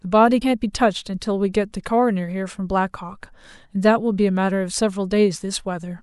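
From 0.38 to 0.43 s, just under half a second into the speech, there is damaged data in the compressed stream. Corrupted bytes reach the decoder, which misreads the frames there, loses its place and hunts for the next valid frame header before normal decoding resumes. The result is a brief glitch of about 44 ms.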